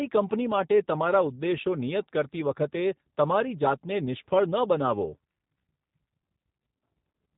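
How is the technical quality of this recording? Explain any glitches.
The quality is clearly limited by low-bitrate compression throughout. Across the whole recording you can hear the signature of the G.729 codec. It rebuilds the speech from a vocal tract filter, a pitch predictor and a few pulses per frame rather than sending the waveform itself, which fits a narrow 8 kbit/s VoIP stream. Nothing above 4 kHz survives, so it sounds boxy and dull, and the voice takes on a plainly audible rough, slightly synthetic buzz.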